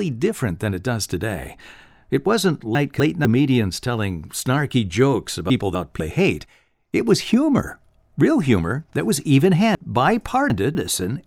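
Chunks out of order at 2.75–3.25 s (before "telling snarky jokes"), 5.5–6.0 s (before "hate it was humor") and 9.75–10.75 s (after "humor that was even"). A 250 ms chunk arrives one slot late in the first two and three slots late in the third, jumbling the speech, with vertical seams at the joins in the spectrogram and waveform.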